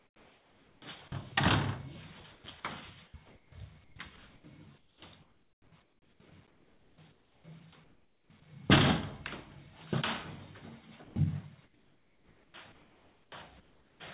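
From 0 to 1.32 s, 2.2 to 8.3 s and 11.04 to 14.0 s the sound turns choppy. Stretches drop out and are replaced by a flat hiss, about 0.9 s, 3.3 s and 2.0 s in total. This is likely sound chopped by the voice detector: the sender's detector kept toggling transmission off, and the receiver filled the gaps with generated comfort noise. Throughout, nothing above 4 kHz comes through, which fits a narrowband call codec.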